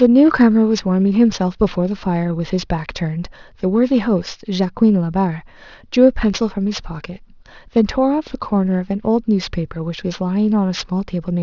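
Throughout the clip there is aliasing: the audio was resampled to a lower rate without an anti-aliasing filter, which fits a drop from 24 kHz to 12 kHz. Everything above the new 6 kHz limit folds back below it, landing at unrelated frequencies. Sibilants in the speech sound gritty and metallic, and the high band is crowded up to 6 kHz, with the folded energy sitting roughly 25 dB below the speech.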